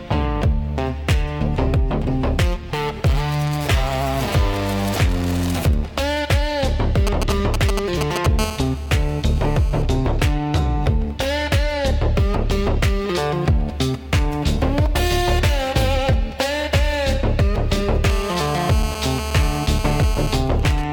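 From 7.07 to 8.26 s a nearby 2G phone sends only short signalling bursts, which the audio circuit rectifies into GSM signalling bursts: a galloping dit-dit-dit of brief 217 Hz buzzes, loud and only a few dB under the sound. From 8.39 to 9.82 s the phone transmits continuously as in a call, pulsing 217 times a second, and the rectified pulses become GSM phone buzz, a hard, raspy 217 Hz tone full of harmonics at about -14 dB relative to the sound. It returns from 18.10 to 20.36 s at about -11 dB. At 20.36 s the phone drops back to signalling bursts while the caller is silent. Much fainter ticks and buzzes continue well below the sound until 20.84 s.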